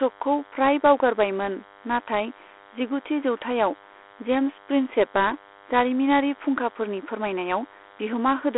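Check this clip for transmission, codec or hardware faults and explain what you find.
Two faults run through the whole recording: a DECT cordless phone buzz and the coding damage of Dialogic VOX ADPCM.

From start to finish, a thin, steady buzz sits under the speech, roughly 30 dB below it. It has a 100 Hz fundamental and a dense stack of harmonics. A nearby DECT handset or base station transmits a brief radio burst every 10 ms. Somewhere in the audio chain a circuit rectifies that RF, and each burst becomes a small click, so the clicks fuse into a 100 Hz buzz.

Also throughout, the speech sounds narrow and gritty. A rough, grainy hiss rises and falls with the voice and is plainly audible. The band resembles a phone line, about 300 Hz to 3.4 kHz, and nothing is present above 3.9 kHz. This is Dialogic VOX ADPCM, the 4-bit adaptive coding used in phone menus and voicemail. Each sample is coded as a coarse step from a prediction, and the step size tracks the signal. 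That makes the quantisation noise follow the speech. The result fits a 32 kbps VOX file at 8,000 samples a second.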